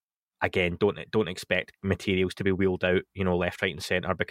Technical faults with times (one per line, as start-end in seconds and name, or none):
none